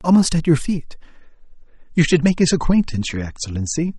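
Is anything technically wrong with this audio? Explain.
Yes. From 1.20 s to the end, the audio shows an adaptive stream switching to a lower bitrate. The player stepped down to a cheaper encoding when throughput fell, with no gap at the switch. The quality change is abrupt: the band above 8.4 kHz disappears, leaving the speech dull with more audible codec artefacts. This fits an MP3 stream dropping from 128 kbit/s to 32 kbit/s.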